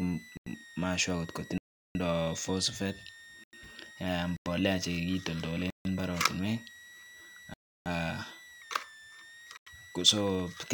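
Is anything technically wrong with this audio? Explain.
Yes. A switching supply whistle runs throughout. It sits around 2 kHz, drifting between 1.75 and 2.05 kHz, roughly 20 dB below the speech.

Seven blocks of digital silence occur, at 0.37, 1.58, 3.44, 4.37, 5.70, 7.54 and 9.57 s. Most last about 93 ms, which fits a 4096-sample buffer. Others last 0.15, 0.32 and 0.37 s. The output buffer likely went unfilled, so the sound cuts out and back abruptly.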